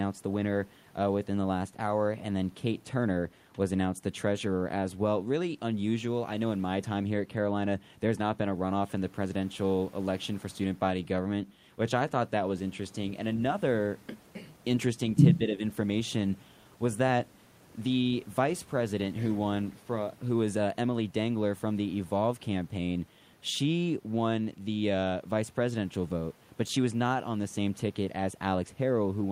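An echo canceller likely mistook overlapping talk from both ends for its own loudspeaker echo and turned the near talker down, which is speech suppressed in double talk. From 15.38 to 15.62 s the speech dips briefly, sinking by a modest few decibels for about a fifth of a second.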